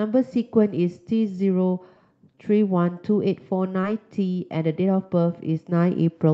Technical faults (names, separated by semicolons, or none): short concealed packet loss